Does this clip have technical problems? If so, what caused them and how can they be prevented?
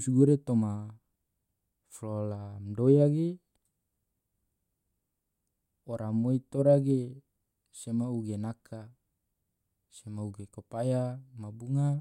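No, nothing in this speech clip points to a technical fault, so there is no cause to trace and nothing to prevent.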